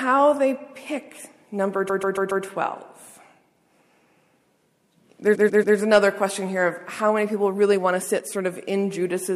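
Repeated frames at 1.88–2.44 s and 5.34–5.76 s: a 0.14 s block replays four, then three extra times. It sounds like a stuttering echo, and adds time rather than losing any, unlike a dropout.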